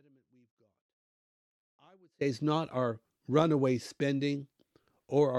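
From the start to 2.21 s, an audio dropout to a faint residue, likely a broken feed, leaves sound about 35 dB down. Speech snaps back abruptly at "it's not our runaway", not fading in.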